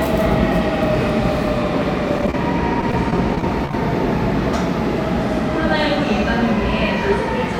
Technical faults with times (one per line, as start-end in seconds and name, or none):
2.18-2.34 repeated packet loss (robotic sound)
2.81-3.74 repeated packet loss (robotic sound)